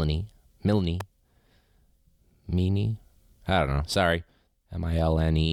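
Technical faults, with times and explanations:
1.00 s, electrical switching spike: a sharp snap, only a few milliseconds long, sits on top of the speech and peaks at about -15 dBFS. It has the abrupt, broadband attack of an electrical discharge rather than anything acoustic. The likely cause is a nearby switch, relay or motor arcing and the audio line picking up the burst, which is why it sounds like a dry tick added over the signal.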